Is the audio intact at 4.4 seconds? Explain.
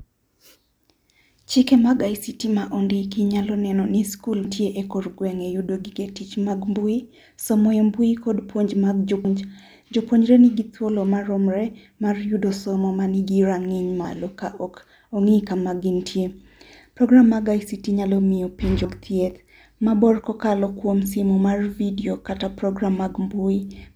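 No. The recording was likely made in chunks of about 5 seconds, and around a fifth of a second of audio went missing at the changeover from one chunk to the next, at 4.45 s. This is audio missing between chunks. Right after "nyalo neno ni skul", the speech jumps ahead because the two sides are butted together with no silence between them. The result is an abrupt skip.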